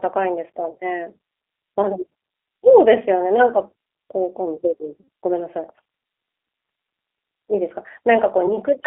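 Throughout, the speech has passed through the G.729 codec. At 8 kbit/s, it rebuilds each 10 ms frame from a vocal-tract filter, a pitch predictor and a few pulses. The band is confined to roughly 300 Hz to 3.6 kHz, and the coding damage is plainly audible as a rough, slightly synthetic grain on the voice.

VoIP packet loss concealed by the speech codec occurs three times. At 0.71 s, the gap lasts about 50 ms, consistent with roughly 40 ms of lost audio. At 5.01 s, the largest loss runs about 70 ms. At 8.46 s, a shorter loss of about 20 ms spreads over about 0.12 s. Each time, the decoder extends its last pitch and filter state at falling gain, producing a brief buzzy or smeared tone before normal decoding recovers.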